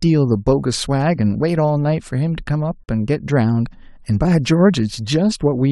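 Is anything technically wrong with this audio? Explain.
Yes. At 2.84 s, a gap at a join of encoded pieces: untrimmed encoder padding inserts a 46 ms gap, a flat waveform stretch and blank vertical spectrogram stripe.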